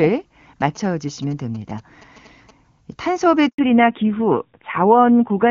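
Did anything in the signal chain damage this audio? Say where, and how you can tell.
Yes. In the analogue wiring, GSM signalling bursts run from 0.61 to 2.51 s. A galloping pattern of short buzzes repeats at about 217 Hz, roughly 25 dB below the speech. A nearby 2G phone's radio bursts are being rectified by the audio circuit.

In the network, a handover gap sits from 3.48 to 3.58 s and lasts 100 ms. The speech dies away quickly, falls silent, then resumes. The call switched networks, and no speech frames arrived during the switch, so that stretch is lost.

In the codec, there is a fallback to narrowband from 3.58 s to the end. Before it, the HD Voice wideband codec carries content up to about 7 kHz, which fits AMR-WB at 23.85 kbit/s. After it, nothing above 4 kHz remains. The voice turns duller and rougher, which fits AMR-NB at 7.4 kbit/s.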